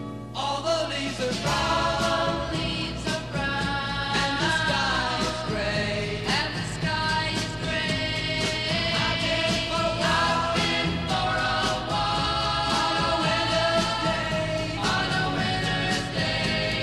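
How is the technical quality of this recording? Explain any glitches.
The recording is marred by one fault that runs the whole way through. A steady, low mains hum sits under the sound from start to finish, a constant 60 Hz drone with some low harmonics, at roughly 15 dB below the signal. It comes from the power line leaking into the audio path, typically through a ground loop or a nearby transformer.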